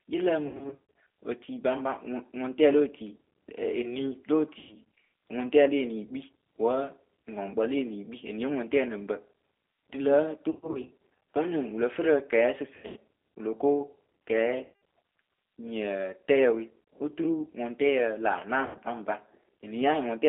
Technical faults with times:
0.00-20.29 G.729 codec
0.47-0.79 VoIP packet loss concealed by the speech codec
4.59-4.75 VoIP packet loss concealed by the speech codec
10.51-10.92 VoIP packet loss concealed by the speech codec
12.76-12.96 VoIP packet loss concealed by the speech codec
14.64-14.72 VoIP packet loss concealed by the speech codec
18.66-18.77 VoIP packet loss concealed by the speech codec

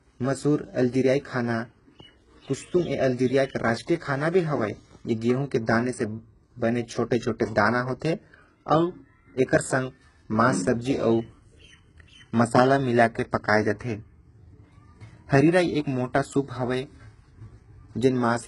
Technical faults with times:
0.00-18.47 HE-AAC compression

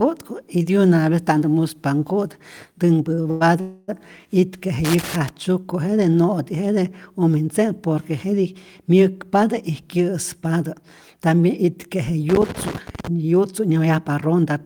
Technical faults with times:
3.09-3.43 repeated stalls (stutter)
3.61-3.90 call audio freeze
4.85-5.29 loose connector crackle
12.29-13.07 loose connector crackle

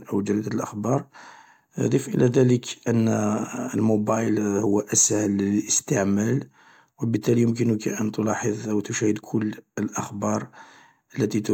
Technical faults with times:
none

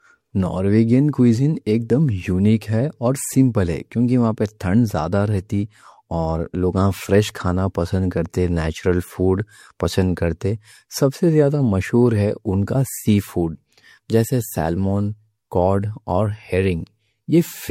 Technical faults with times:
0.00-17.70 generation loss

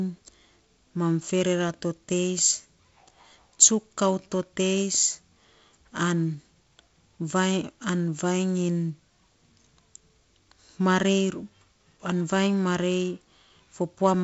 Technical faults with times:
none

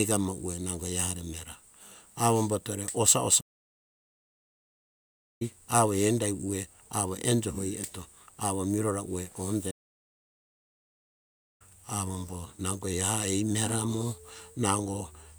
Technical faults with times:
3.40-5.42 playback stall
9.70-11.62 playback stall

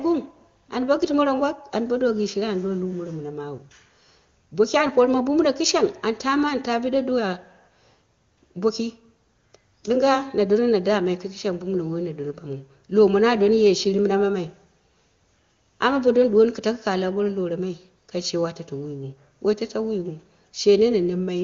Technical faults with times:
none

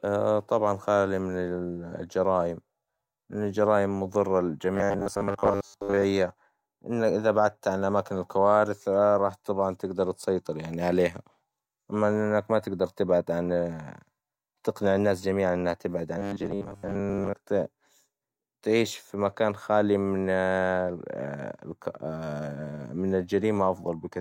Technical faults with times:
4.75-6.04 robotic sound from repeated short buffers
16.18-17.33 robotic sound from repeated short buffers

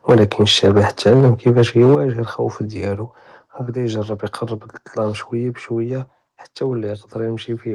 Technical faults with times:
0.09-1.95 microphone overload
0.12 microphone volume stepped down
1.95 microphone volume stepped down

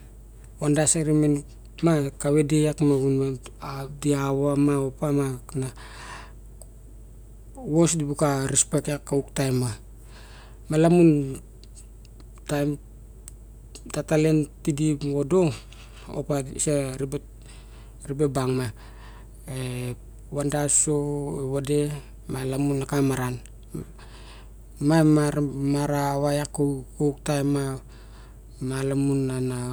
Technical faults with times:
none

